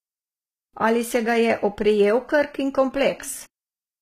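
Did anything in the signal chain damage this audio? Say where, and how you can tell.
Yes, at the codec stage the damage is likely HE-AAC compression at a low rate, around 20 kbps. Throughout, s sounds turn gritty and lispy, and a spectrogram shows nothing above 14.9 kHz, with the treble a smeared, blocky copy of lower bands rather than real harmonics.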